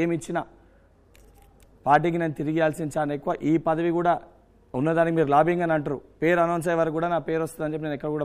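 No technical faults are audible.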